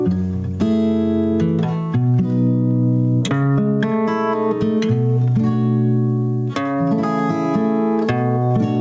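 Right from the start and all the way through the music there's gain pumping. Every loud hit pulls the level down, with a swing of around 10 dB. That breathing pattern most likely comes from the input gain being set far too high, with a fast limiter or compressor clamping it on each peak. The result is squashed dynamics, with loud and soft passages sitting uncomfortably close together. Nothing comes through above 8 kHz, which fits a wideband call codec such as G.722.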